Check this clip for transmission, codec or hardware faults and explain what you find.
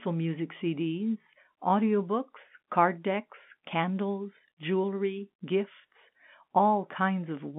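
The speech comes through an ordinary G.711 telephone path, limited to a line band of about 150 Hz to 3.6 kHz with nothing above 4 kHz, and its 8-bit logarithmic coding, which fits 64 kbps mu-law, leaves at most a faint quantisation noise that follows the level, with nothing that points to any fault.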